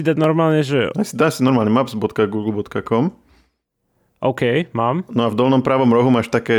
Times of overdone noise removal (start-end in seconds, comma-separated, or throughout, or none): none